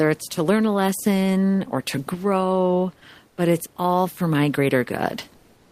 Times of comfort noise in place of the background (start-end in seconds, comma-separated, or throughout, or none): 3.28-3.37